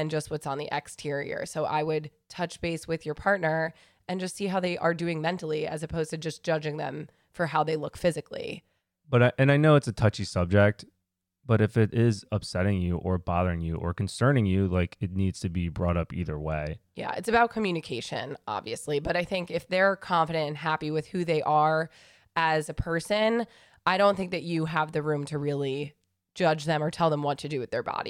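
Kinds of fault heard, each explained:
No technical faults detected in the speech recording; nothing to report.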